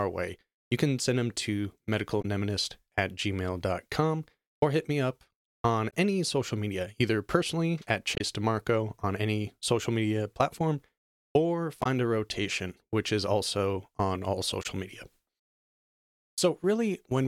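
Damaged data in a compressed stream makes the decoder misread frames and lose sync, producing short glitches of about 40 to 50 ms at 2.21, 5.89, 8.15, 11.82 and 14.62 s.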